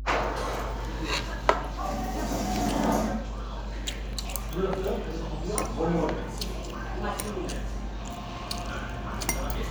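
From the start to the end there's mains hum running under everything, a steady 50 Hz drone with a few low harmonics on top. Something like a ground loop or nearby transformer is leaking the power line in, and it sits only a little below the actual sound, so it's hard to miss.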